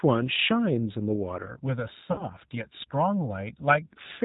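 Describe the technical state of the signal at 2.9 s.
At 2.9 s the speech is inside a stretch of channel delay (comb filtering) running from 1.46 s to 3.84 s. One channel lags the other by around a millisecond and a half, and summing them to mono cancels evenly spaced frequencies starting near 400 Hz, so it sounds hollow and phasey.

Under that, the whole clip carries plainly audible G.729 codec damage, which fits an 8 kbit/s G.729A stream. The speech is rebuilt from a vocal tract model and a few pulses per frame, so nothing gets through above 4 kHz, and the voice comes out band-limited, a bit rough and synthetic.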